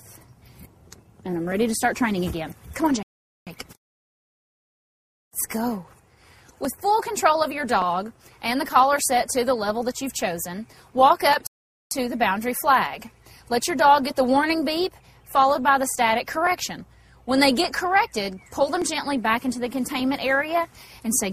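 A regular click recurs every 1.17 s from 0.35 s to 21.17 s, about twenty in all. These are clock drift buffer slips, likely from two devices whose clocks differ by around 500 ppm, so each slip drops or repeats a few tens of samples.

Two rebuffering stalls interrupt playback, at 3.03 to 3.47 s and 11.47 to 11.91 s. Each time, the player ran out of downloaded audio and went silent for about 0.44 s, then resumed exactly where it stopped, adding time without losing any sound.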